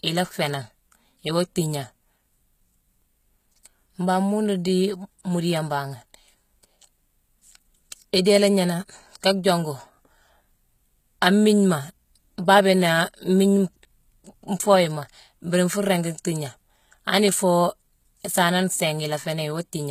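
The treble is rebuilt from copied lower bands throughout, likely HE-AAC compression at a rate that fits about 20 kbps. Nothing passes 14.9 kHz, and s sounds turn plainly gritty and metallic.

At 8.25 s, quantisation noise spread over a transform block leaks ahead of a sharp attack. This pre-echo is heard as 12 ms of hiss that smears the onset.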